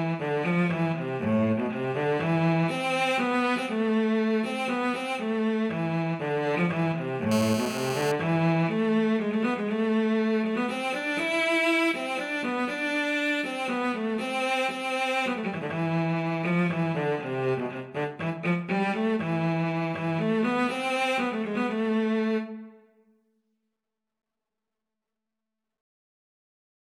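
From 7.32 to 8.12 s, the audio circuitry rectified a nearby 2G phone's 217 Hz bursts, causing GSM phone buzz: a steady, harsh rasp about 8 dB down.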